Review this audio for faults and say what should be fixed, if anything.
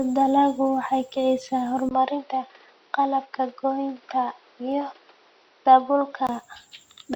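The recording likely switched its input to a poorer device at 1.89 s, just after "waxay kicisaa", with a 20 ms gap. Until 6.29 s the speech turns dull, with a new noise floor roughly 35 dB down.

A couple of samples were likely dropped from the stream at 3.51 s and again at 4.72 s. The waveform jumps each time, producing a single sharp click.

To prevent both, lock the recording to one fixed input device and give the capture path enough buffering that it never loses samples.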